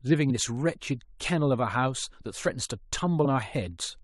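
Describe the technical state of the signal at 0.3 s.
At 0.3 s the speech carries word clock ticks, running from 0.12 to 3.99 s: an unlocked receiving clock drifting about 70 ppm slips single samples roughly every 0.3 s, unlike random clicks.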